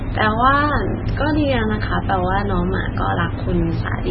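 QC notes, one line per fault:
Throughout, MP3 compression: the speech sounds dull, watery and swirly, with nothing above 5.6 kHz and smeared s sounds. This is likely heavy MP3 encoding at a very low bitrate, around 16 kbps, which cuts the treble and makes weak frequency lines flicker.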